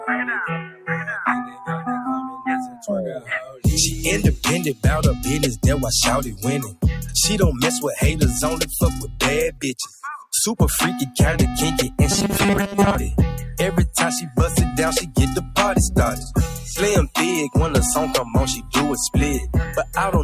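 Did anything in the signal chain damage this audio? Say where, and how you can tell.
Yes. The damage happens in call processing: a noise suppressor applied to music or sounds is active for the whole clip. Its gain swings by roughly 5 dB as it treats steady tones and decays as noise, so the sound pumps and thins between attacks.

Sound cut by the noise suppressor occurs at 0.62–0.9, 1.45–1.88, 2.3–2.86, 3.19–3.65, 6.36–6.84, 9.03–10.33, 18.24–18.74 and 19.67–19.97 s. Sustained parts drop by about 8 to 19 dB for a few hundred milliseconds each while transients pass through.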